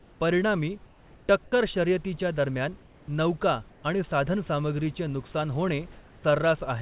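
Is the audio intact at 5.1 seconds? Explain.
Yes, the audio is intact at 5.1 seconds, with no fault there beyond the call path's normal narrowband sound, which has nothing above 4 kHz.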